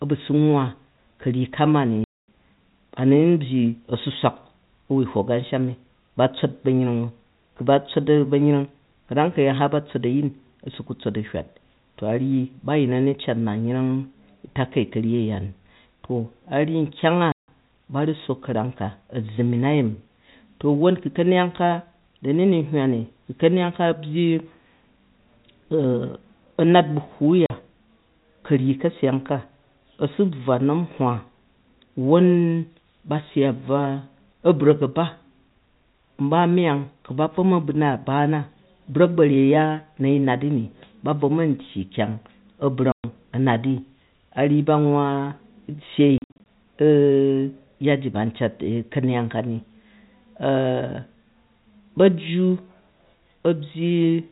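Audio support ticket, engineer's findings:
Speech chopped by dead-silent holes with hard edges: 2.04–2.28 s, 17.32–17.48 s, 27.46–27.50 s, 42.92–43.04 s, plus a scattered cluster across 46.18–46.46 s (longest gap 60 ms). Packet loss filled with silence at the receiver, which plays zeros in place of missing packets. Gap lengths are all multiples of 20 ms, which fits 20 ms packets. The 4 kHz band limit comes from the G.711 telephone coding.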